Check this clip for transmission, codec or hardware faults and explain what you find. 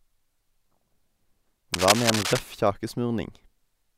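One hardware fault turns up in this speech clip. From 1.74 to 2.39 s there's cable scratch noise, dense uneven bursts of scratching and rustling sitting at roughly the same level as the speech. Likely cause: a worn cable or connector being moved, so its contact resistance jumps around rapidly.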